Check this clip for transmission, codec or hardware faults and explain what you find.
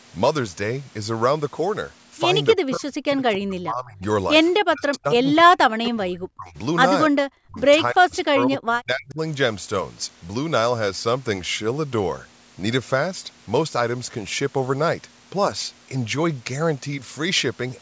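The speech is suppressed in double talk, with six dips at 2.55–4.02 s, 4.59–5.26 s, 5.42–6.57 s, 7.09–7.17 s, 7.46–7.59 s and 7.91–9.19 s. The talker's level falls by about 30 dB in the first dip and about 40 dB in the rest, so the voice dips sharply in each of these stretches. The likely cause is an echo canceller that could not separate the near talker from loudspeaker echo while both sides spoke, and so attenuated both.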